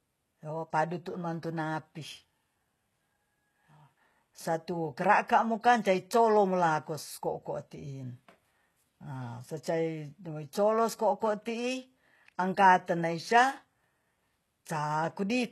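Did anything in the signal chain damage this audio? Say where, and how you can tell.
Yes: throughout, the treble sounds gritty and lispy with nothing above 12.3 kHz, pointing to the codec stage, likely HE-AAC compression at a bitrate around 16 kbps rebuilding the highs by band replication.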